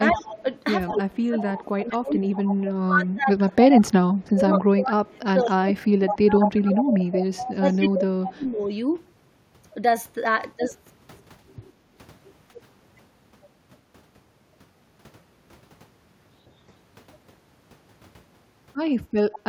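A speech recording with two recurring faults. Speech suppressed in double talk occurs from 0.09 to 2.25 s and from 2.82 to 8.69 s, with a brief dip at 12.54 to 12.58 s. In the two longer stretches the level sinks by roughly 25 to 30 dB, and in the brief dip by about 5 dB. This is likely an echo canceller gating the near talker when it cannot separate them from loudspeaker echo. Echo leak appears at 0.15 to 2.69 s, 5.45 to 5.51 s, 6.06 to 7.78 s and 19.32 to 19.39 s. It is a copy delayed by 192 ms, ranging from about 25 dB down to only about 5 dB below the speech, likely from a far-end loudspeaker path that the canceller failed to remove fully.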